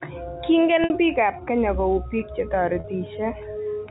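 A speech recording carried over a G.711 telephone path, band-limited below 4 kHz, has two short dropouts from packet loss with pitch repetition. At 0.84 to 0.90 s, just before "biik ab kenya kou", about 60 ms goes missing, which fits three 20 ms packets. At 2.80 to 2.84 s, just after "kenya kou biik che", about 40 ms is lost. In both gaps the receiver loops the last pitch period, producing a brief, held, buzzy tone.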